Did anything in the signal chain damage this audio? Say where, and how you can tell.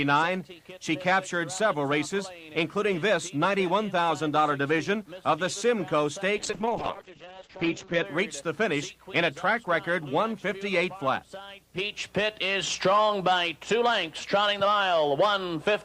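Yes: a call bitrate drop at the codec stage, 6.43 to 8.11 s. The sound coarsens and loses everything above 8 kHz, which fits an encode squeezed to 8 kbps.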